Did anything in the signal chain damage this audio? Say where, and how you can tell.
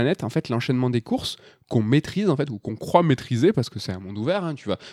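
Yes. From 2.91 to 3.59 s the speech slows 6% and sags 108 cents, then snaps back: likely a drift correction step in the clock-matching buffer.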